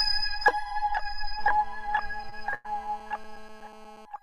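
A recording of everyday sounds carries sample clock jitter from start to finish: the converter's timing wanders by well under a microsecond, and because the error scales with waveform slope it adds a faint hiss about 45 dB below the signal that thickens on loud, bright moments and drops away in quiet ones. On a spectrogram this shows as a diffuse noise haze tracking the high-frequency content. From 1.39 s to 4.05 s a GSM phone buzz sits underneath, a harsh, steady rasp at 217 Hz about 23 dB below the signal. A handset in a call transmits in regular radio bursts that the audio circuitry rectifies, so the buzz ignores the sound itself. It appears as a ladder of evenly spaced horizontal lines at 217 Hz intervals running across the spectrogram, and as a regular pulse train riding on the waveform. Between 2.29 s and 2.94 s the audio stutters: four times the playback stalled as late-arriving data drained the jitter buffer, and each stall was bridged by extending the preceding sound, 162 ms in total, with the longest at 101 ms. 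Nothing is lost, but about a quarter of that stretch is filler, seen as repeated waveform segments and stretched-out spectral features, with the longest fill tapering off.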